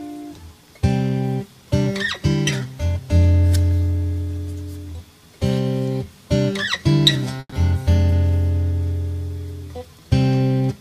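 At 7.39 s the sound stops moving forward and the last moment is stretched into a fading buzz for about 130 ms, then about 30 ms of silence. It resumes at 7.55 s where it left off, with nothing lost, now running about 130 ms late. This call audio freeze is likely from delayed packets draining the jitter buffer.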